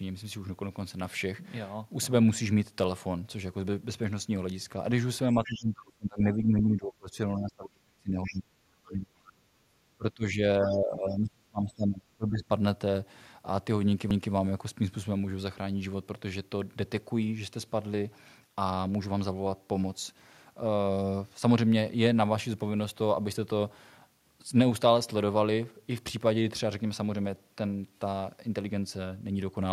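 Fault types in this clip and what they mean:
Speech suppressed in double talk: Between 5.35 and 12.44 s the talker dips by about 20 to 35 dB in five stretches, likely an echo canceller ducking both sides during overlap. The waveform shows sudden envelope collapses, and the spectrogram shows faded or missing high bands within running speech.
Other side's voice leaking through: Near 5.45 s and 8.24 s, a faint second voice surfaces for about 0.15 s each, about 15 dB below the talker, likely residual loudspeaker echo. It appears as harmonic traces layered under the main speech on a spectrogram.
CD skip: At 14.10 s a 4 ms mute gives a short tick, and the audio resumes from a different point on the disc. The waveform shows a brief flat gap with a discontinuity on either side, and the spectrogram shows a thin broadband click line.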